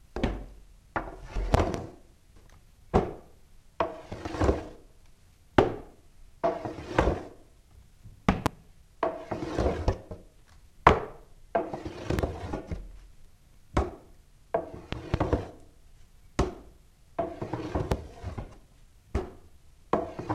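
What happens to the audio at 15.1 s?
Between 14.93 and 15.16 s, two loud pops land on top of the sound, peaking roughly 20 dB above it. A loud pop like this is likely an electrical step or pulse, from a plug, switch, static discharge or driver glitch, entering the signal and being shaped by the circuitry after it. Unlike a dropout or a digital click, nothing is removed: the sound keeps running underneath, and each event is a sharp pop or thump rather than a gap.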